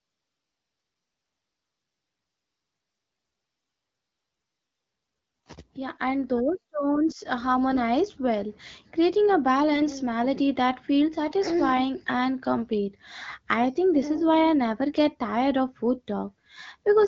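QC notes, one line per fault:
9.74–9.84 s, AMR bit errors: on a weak radio link, bits in the less protected part of the AMR-WB frames arrived flipped, at around one bit in twenty. The checksum over the key bits still passed, so the decoder played the frames instead of masking them. Its excitation pulses landed in the wrong places and the fine gain and spectral values drifted, so for about a tenth of a second, which fits five frames, the speech keeps its pitch and level but turns hoarse and gargly against the light coding texture of the 12.65 kbit/s wideband codec.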